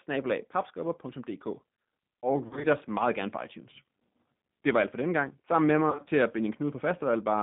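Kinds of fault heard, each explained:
G.729 codec: The speech runs through G.729 at 8 kbit/s, which rebuilds each 10 ms frame from a vocal tract filter, a pitch predictor and a few pulses, so the codec damage is plainly audible as a rough, slightly synthetic texture. The line is band-limited to roughly 150 Hz to 3.6 kHz, and a spectrogram shows empty space above about 3.6 kHz and below 150 Hz, with smeared, grainy harmonics inside the band.
VoIP packet loss concealed by the speech codec: Packets drop out in two scattered bursts, around 2.46 to 2.67 s and 5.90 to 6.09 s, with runs of up to 30 and 40 ms. At each gap the decoder stretches its last pitch and filter and lowers the gain, so the speech turns into a brief buzzy tone or coloured noise that fades. The waveform shows shrinking, overly regular cycles, and the spectrogram shows flat, repeated harmonic bands that recover slowly afterwards.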